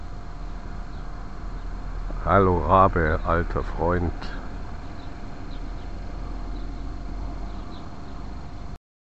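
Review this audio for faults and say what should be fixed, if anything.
DAB burbling runs from about 1.95 s to 2.11 s. Bit errors slipped past the error correction into the MP2 data. Wrong samples put short blips of noise into single sub-bands. The span fits about ten damaged frames and a bit error rate around a tenth of a percent. On a spectrogram, isolated horizontal bands flash briefly. The waveform shows brief irregular bursts. Improving reception with a better antenna placement or a stronger multiplex signal would keep the error rate low enough for correction to cope.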